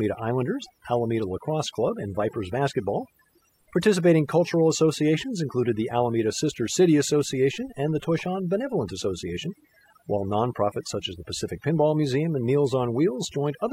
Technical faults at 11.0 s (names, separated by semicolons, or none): overdone noise removal